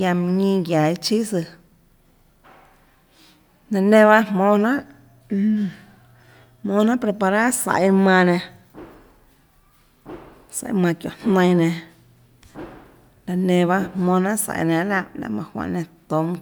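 No technical faults can be heard anywhere in the speech recording, with the signal holding steady and continuous throughout.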